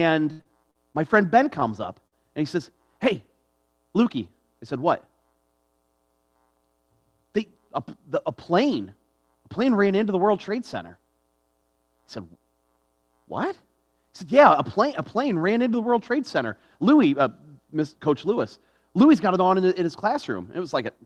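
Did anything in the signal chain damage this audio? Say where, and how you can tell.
Yes. The damage happens in the network stage. From 0.31 to 0.96 s there is repeated packet loss with a robotic sound. Four gaps arrive in quick succession, the longest 78 ms. About a quarter of that stretch is concealment, roughly 163 ms of extrapolated fill, and 180 ms of the original audio is missing. The receiver keeps stretching the last frame to cover each hole, which gives a choppy, metallic texture. On a spectrogram this shows as repeated smeared, frozen harmonic bands. The waveform shows chopped, periodic segments.

At 1.61, 1.69, 1.73 and 1.83 s, a single lost packet is rebuilt from error correction each time. Each 20 ms frame was recovered from the low-bitrate copy carried in the following packet, Opus in-band FEC, so nothing drops out. Those frames sound briefly rougher and noisier. On a spectrogram they appear as thin vertical slivers of grainier, less detailed energy. 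The waveform shows no gap.

From 2.07 to 2.14 s there is a burst of packet loss. The decoder held the last sound for about 46 ms, fading it as the gap went on. Playback then resumes with about 40 ms of the original audio skipped. On a spectrogram this looks like a short stretch of frozen, decaying spectrum followed by an abrupt jump. In the waveform, the envelope tapers and then restarts discontinuously.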